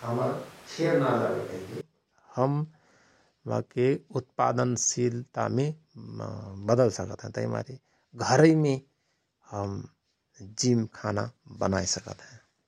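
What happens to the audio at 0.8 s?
At 0.8 s the speech sounds roomy and hollow, with thin bass. It is already like this when the clip opens and snaps back at 1.81 s. The likely cause is a switch to a distant microphone. The level sits about 5 dB lower, with room noise about 25 dB below the speech.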